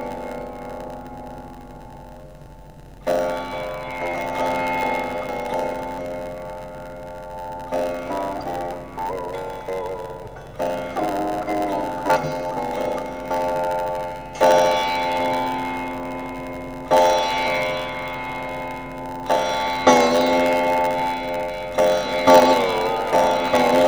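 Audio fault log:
throughout: block size mismatch (padded). Each block is written shorter than the next stage reads and zero-filled, so a brief gap recurs at the block rate, producing a 91.9 Hz buzz, and playback runs slow at 0.919x speed while timbre is preserved.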